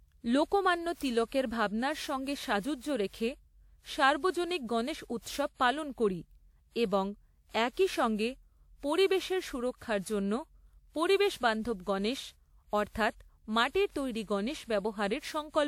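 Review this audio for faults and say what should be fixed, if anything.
Generation loss runs through the whole speech track. The sound is swirly and hollow, with consonant attacks smeared, more than a single encode at this rate should give. That fits a WMA 1 chain at around 96 kbit/s, most likely re-encoded about seven times, with each pass requantising on a shifted frame grid so the noise piles up. Content stops around 20.1 kHz. To prevent it, go back to the original and encode only once.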